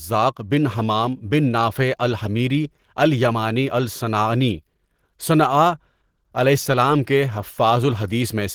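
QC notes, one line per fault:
throughout, Opus compression: likely a low-rate Opus encode near 16 kbps in hybrid mode, leaving the speech plainly hoarse and rough while bandwidth stays full.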